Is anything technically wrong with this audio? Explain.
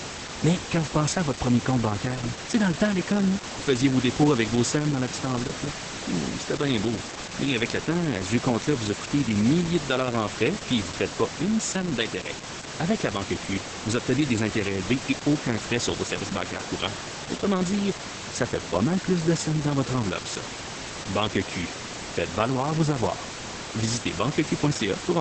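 Yes. The whole clip carries Opus voice compression, and the damage is heavy. The codec is running its SILK speech coder in wideband mode, so there's nothing above about 8.6 kHz, and the excitation is coded very coarsely, which fits a bitrate around 10 kbps. You hear that as muffled, hoarse speech with a somewhat robotic edge. The room noise, sitting about 10 dB below the speech, is just part of the recording.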